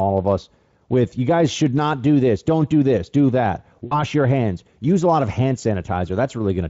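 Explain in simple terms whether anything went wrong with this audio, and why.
Yes, one short glitch. At about 3.85 to 4.01 s, between "do this do that" and "your hands use a", there is VoIP packet loss concealed by the speech codec. About 60 ms of audio went missing, which fits three 20 ms frames lost in transit. Instead of silence, as a plain dropout would leave, the Speex decoder filled the gap by stretching the last sound into a buzzy tone or coloured noise that fades, and the voice stays weak or distorted just after.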